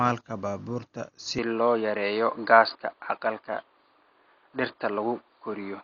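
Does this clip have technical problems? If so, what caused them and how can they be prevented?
Yes. Across the whole recording the speech is dull, with rough, fluttering noise around voiced tones and nothing above 7 kHz. The likely cause is Dolby Digital compression at a very low bitrate, around 40 kbps, where the encoder narrows the band and gives many frequency lines no mantissa bits, which the decoder fills with dither noise. On a spectrogram this appears as a hard ceiling at 7 kHz and grainy, speckled texture around the harmonics. Encode at a higher bitrate, or keep an uncompressed master for editing.

From 1.39 s to the end, the sound suddenly turns boxier, the band shrinks to nothing above 4.7 kHz, the level shifts by about 5 dB, and a faint new background noise appears well below the speech. There is no gap at the change. This is most likely an input switched to a poorer device, such as a headset's call profile. 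On a spectrogram the upper edge drops abruptly from 7 kHz to 4.7 kHz at 1.39 s, and the waveform shows a step in level at the same point. Lock the recording input to one device and disable automatic switching to headset call modes.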